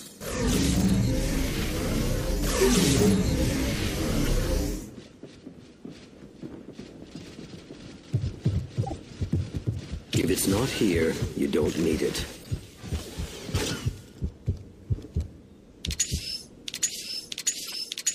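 Corrupt frame decoded at 4.25–4.28 s, 8.81–9.01 s, 12.41–12.47 s, 13.66–13.69 s and 17.67–17.74 s: damaged compressed frames were decoded anyway, misplacing energy across frequencies. Each is a brief chirp or noise burst, peaking between about -15 and -30 dBFS. The one near 9 s spans several frames.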